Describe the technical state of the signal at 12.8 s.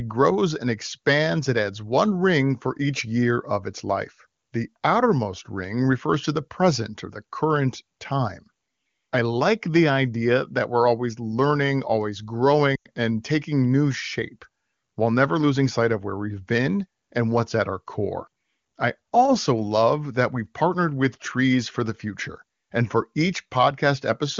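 Lost AMR speech frames occur from 12.76 to 12.86 s, a gap of about 100 ms, which fits a run of five 20 ms frames. Radio errors corrupted those frames, so the wideband decoder concealed the gap by reusing the last good pitch and vocal tract parameters while lowering the gain. The speech drops to near silence within two frames, as wideband concealment does. When intact frames resume, the speech returns weak or rough for a moment.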